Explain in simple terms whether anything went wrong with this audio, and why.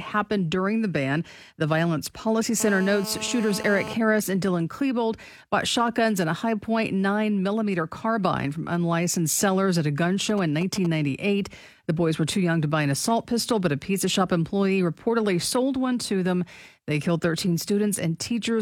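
From 2.60 to 3.94 s, a GSM phone buzz sits under the speech: a raspy 217 Hz drone from a nearby phone on a call, picked up by the audio circuitry.

Right after "sellers at a gun", from 10.29 to 10.87 s, GSM signalling bursts appear as a galloping dit-dit-dit of ticks and brief 217 Hz buzzes. A nearby phone is briefly exchanging signals with the network.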